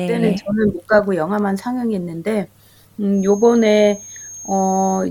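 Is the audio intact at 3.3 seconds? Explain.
No. From 3.11 s to the end of the clip, a thin, steady whistle near 6.5 kHz sits behind the sound, roughly 20 dB below it and swelling and fading slowly in level, so 3.3 s falls inside it. This is a feedback whistle, likely caused by a loudspeaker-to-microphone loop poised right at its feedback threshold. At that single frequency the loop keeps re-amplifying itself just enough to sustain a tone, but not enough to build into a runaway howl.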